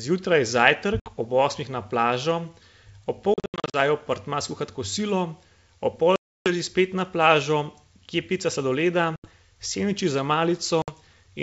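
Speech over a wideband call whose G.722 coding sounds like full 64 kbit/s with at most faint coding damage, hit five times by packet loss on an ADPCM call. Packets vanish and are filled with silence, leaving the receiving decoder's adaptive predictor and step size out of step with the sender's. Each hard-edged gap is followed by speech that resumes with brief, slight distortion before it settles. The gaps fall at 1.00–1.07 s (60 ms); 3.34–3.75 s, where 280 ms drops out in bursts of up to 80 ms spread over 400 ms, just before "v apartma skuhat kosilo"; 6.16–6.52 s (300 ms); 9.16–9.28 s (80 ms), before "sendviči za"; and 10.82–10.93 s (60 ms), right after "sendviči za".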